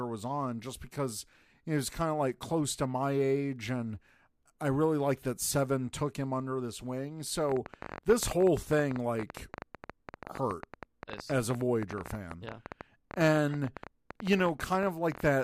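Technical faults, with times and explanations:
7.49 to 15.27 s, train of clicks: Just after "him under this wing", a run of sharp ticks begins and lasts to near the end. They come about 13 times a second at an uneven pace, roughly a hundred in all. Each has much the same short, popping shape. They peak around 10 dB above the speech, so they stand out over words and pauses alike. Electrical interference or a faulty connection or power supply is the likely cause.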